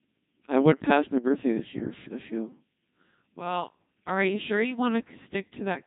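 Throughout the speech the voice is robotic and buzzy, heavily damaged, with the natural grain replaced by a synthetic tone. This is the Codec 2 vocoder, which fits a rate near 2.4 kbit/s: only pitch, voicing, energy and spectral shape are sent, and the voice is rebuilt from sine waves.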